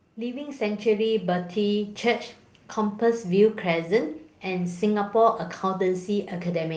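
From 0.15 to 2.3 s, automatic gain rising lifts the level by about 7 dB. The control judged the input too quiet and raised its gain gradually, so speech and background noise swell together. A speaker moving closer would raise only the speech.

Inside that rise, at 0.51 to 0.53 s, a lost packet is rebuilt from error correction. The decoder played a low-bitrate copy carried in the next packet, so 20 ms turn briefly rougher and noisier, with no gap or smeared, held sound as concealment would leave. The same happens at 5.37 to 5.43 s over 40 ms, which fits two separate packets.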